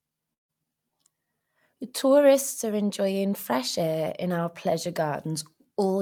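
Right near the start, from about 0.33 to 0.51 s, the speech breaks off and the last bit of sound gets stretched into a buzzy, hissy tail that fades for roughly 150 ms before dropping to silence. When the speech comes back, around 160 ms of it has simply been skipped. That's most likely a long network dropout: packets stopped arriving, the receiver papered over the gap with synthetic fill, then gave up and went quiet.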